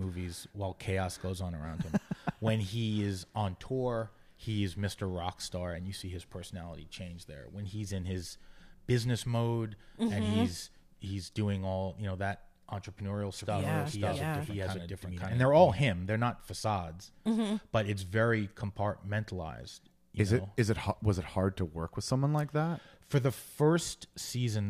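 From about 13.38 s to 15.80 s the speech carries a doubled audio track: a second, full-band copy trails the original by around half a second at roughly equal loudness. The likely cause is the same signal being captured again through a slower path, or an edit leaving two copies out of step. Unlike an echo or reverb tail, the copy neither fades nor picks up room colour, and it switches on and off abruptly at both ends.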